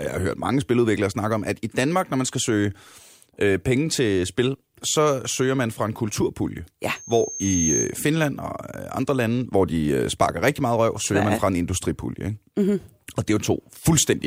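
A speech recording with a loudspeaker feedback squeal from 6.96 to 7.98 s. A single tone at 6.4 kHz swells up over most of a second until it's about as loud as the speech, because the mic was picking up its own speaker and the loop ran away at that frequency.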